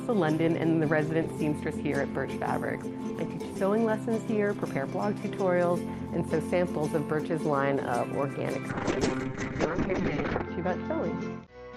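From 8.7 s to the end, a call bitrate drop forces the encoder from 40 kbps down to 7 kbps and narrows the band from 20 kHz to 8 kHz. The sound turns muffled and watery, and a spectrogram shows everything above 8 kHz gone.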